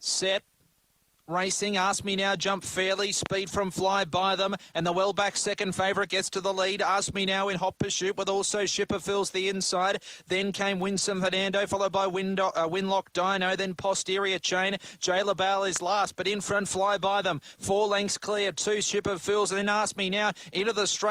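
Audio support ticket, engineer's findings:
Loud pop, 3.26–3.28 s and 15.76–15.78 s: single sharp transient, roughly 15 dB above the signal, sound continuing underneath. Likely a voltage step from a plug, switch, static or driver glitch.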